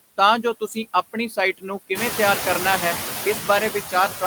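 Noise suppressor artifacts run throughout: the suppressor pulls the background down by about 9 dB frame by frame, so residual noise dips between phrases and rises under the speech, and the room noise itself rises around 2 s.

From 1.13 to 1.36 s comes speech cut by the noise suppressor, just before "ਸਾਈਟ ਨੂੰ ਕਿਵੇਂ ਤਿਆਰ". About a tenth of a second of soft speech is mistaken for noise and dropped by about 9 dB, sounding swallowed and faint.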